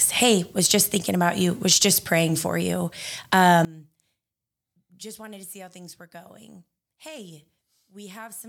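One channel inverted, from 3.65 s to the end: in mono the speech falls by about 23 dB and turns faint. One stereo channel likely has reversed polarity, so the centred voice, shared by both sides, cancels when summed, leaving only their small difference.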